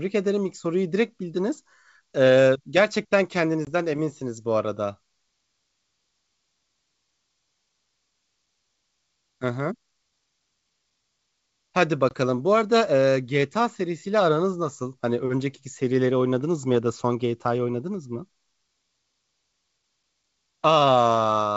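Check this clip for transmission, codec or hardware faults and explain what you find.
Two brief transmission dropouts are audible in this speech. Packet loss on an ADPCM call occurs at 3.65 to 3.70 s and again at 12.09 to 12.14 s. Each time, a couple of packets, about 20 ms of audio, go missing and are filled with silence, leaving a hard-edged hole. The receiving decoder's adaptive predictor and step size are left mismatched with the sender's, so the speech comes back with slight distortion before recovering. The G.722 wideband coding, at a bitrate that fits 64 kbit/s, carries clear speech up to around 7 kHz around these gaps.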